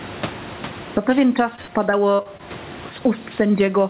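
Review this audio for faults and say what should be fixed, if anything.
Throughout the speech, loud and soft parts are squashed close together. This is gain pumping, likely from input gain set far too high and a fast limiter pulling it down by about 15 dB each time. Lowering the microphone gain so the limiter rarely engages would prevent it.

From 1.56 to 2.41 s the speech turns choppy, with pieces dropping out in quick succession, the longest gap about 60 ms. This is repeated packet loss (robotic sound): each hole is patched by stretching the last sound, covering about a fifth of that stretch. A steadier network connection or stronger loss protection on the call would prevent it.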